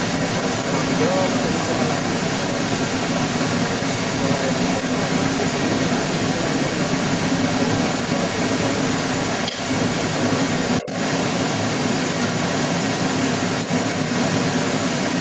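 From start to finish, the other side's voice leaks through. A second voice runs alongside the talker throughout, and sounds well above the talker's level. It is likely that the echo canceller failed to remove the loudspeaker sound from the microphone. The audio stops at 8 kHz.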